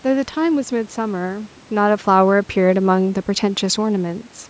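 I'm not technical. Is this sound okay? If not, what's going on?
Yes, this sound is okay.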